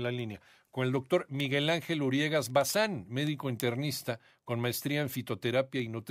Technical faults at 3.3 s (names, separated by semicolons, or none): word clock ticks